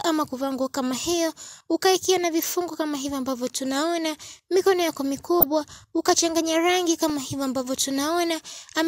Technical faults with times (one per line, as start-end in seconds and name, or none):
5.41-5.43 DAB burbling
7.10 DAB burbling